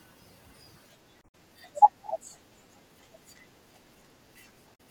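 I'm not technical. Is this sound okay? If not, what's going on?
No. Two short bursts of damaged data in a compressed stream appear, at 1.19 to 1.35 s and at 4.72 to 4.80 s. Corrupted bytes throw the decoder off track, giving a brief chirp or blip. The first also adds about 24 ms of extra time.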